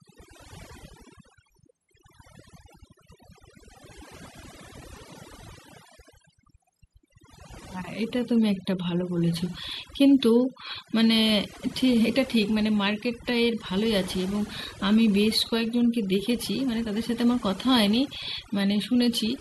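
Across the whole recording, a noise reduction stage pushed far too hard cuts any frequency band near its noise estimate, stripping quiet parts of the speech along with it. This overdone noise removal leaves near silence flecked with twinkling specks.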